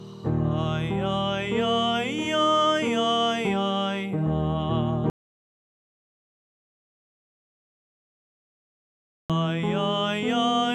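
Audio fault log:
5.10 to 9.30 s, audio dropout to silence: the sound stops mid-flow and 4.2 s of silence follows, with no room tone, before it cuts back in. The input was likely lost while recording continued writing silence, so that stretch is gone.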